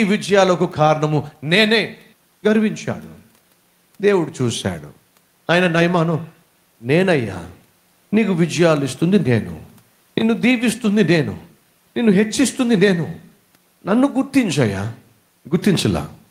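Speech recording with no audible technical faults.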